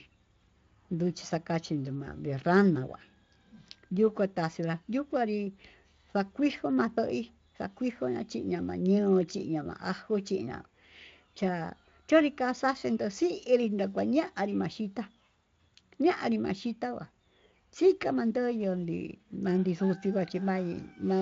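No faults are audible in the speech; it runs through a Speex codec at a high setting, and its content stops at about 7.6 kHz.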